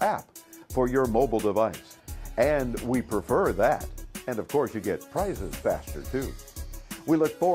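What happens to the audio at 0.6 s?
Nothing goes wrong at 0.6 s: the audio runs through that moment intact, with no dropout, click or other fault to be heard.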